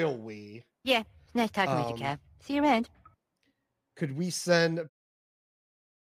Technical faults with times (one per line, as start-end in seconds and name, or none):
none